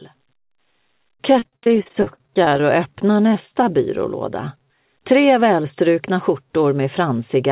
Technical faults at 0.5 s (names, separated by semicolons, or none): none